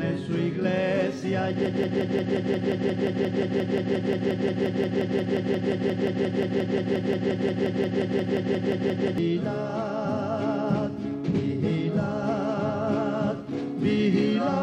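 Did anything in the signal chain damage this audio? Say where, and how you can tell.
Yes. From 1.66 s to 9.18 s the audio turns into a broken-record loop: one fragment 176.6 ms long repeats exactly, back to back, 43 times, and the material that should have filled those seven and a half seconds is gone. The fault sits in a buffer in the player, encoder or stream path, which likely stalled and kept re-sending the last block it held, so identical segments cycle at a steady rate near 5.7 per second.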